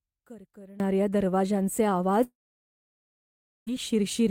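From 0.0 to 0.8 s the speech is about 22 dB quieter and faint, the sign of one channel inverted, likely, so both channels largely cancel when summed to mono. The waveform shows a small, flattened envelope.

At 2.23 s a long network dropout, likely, cuts the speech until 3.69 s. The receiver briefly extends the last sound as a fading buzz or hiss, then about 1.34 s of near-silence follows, a flat waveform line and an empty spectrogram band, before the speech resumes with roughly 1.4 s missing.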